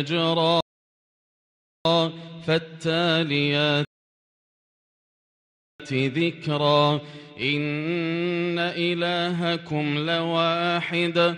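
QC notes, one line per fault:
0.61–1.85 s and 3.85–5.80 s, rebuffering stall: the player twice drained its store of downloaded audio and had to halt until more data arrived, so playback freezes into silence for 1.2 s and then 1.9 s. Each time the sound picks up exactly where it broke off, with nothing skipped or repeated. The content stays complete, but the gaps push everything after them later, adding about 3.2 s in total.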